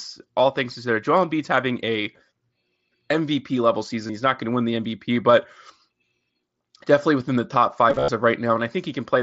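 Concealed Bluetooth headset packet loss causes brief gaps of 15 to 23 ms at 4.07–4.09 s, 5.14 s and 6.59 s. Each is patched from the preceding waveform. From 7.90 to 8.08 s, losses cluster, the longest run 45 ms, producing a buzzy held tone and a slight warble as the speech resumes.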